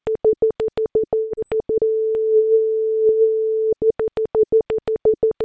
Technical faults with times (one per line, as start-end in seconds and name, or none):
1.18-1.40 long network dropout
1.83-2.62 jitter buffer slow-down